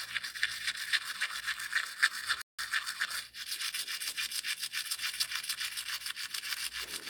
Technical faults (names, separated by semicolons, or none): playback stall